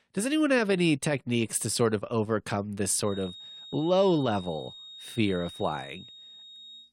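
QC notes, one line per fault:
2.97–6.93 s, feedback whistle: a thin, steady tone near 3.7 kHz enters and holds to the end of the clip, sitting roughly 20 dB under the speech and swelling and fading slowly in level. It is likely a loudspeaker-to-microphone loop hovering just at the edge of feedback.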